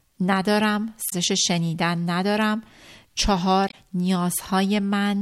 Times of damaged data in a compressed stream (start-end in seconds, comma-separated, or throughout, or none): 1.06-1.13, 3.67-3.74